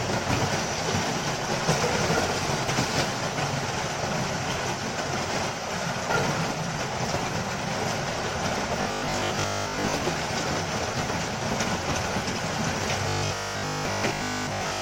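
From 8.82 to 9.94 s, and again from 13.09 to 14.81 s, the sound takes on a rigid, metallic quality with a steady 50 Hz buzz imposed on it: robotic sound from repeated short buffers. The likely cause is audio arriving too seldom, so the playback fills gaps by looping the last fragment, which fits a 20 ms buffer. Most of the real audio in these stretches is skipped, leaving only a rough outline of the original.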